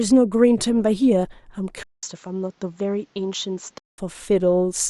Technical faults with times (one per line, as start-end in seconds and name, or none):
1.83-3.98 input switched to a poorer device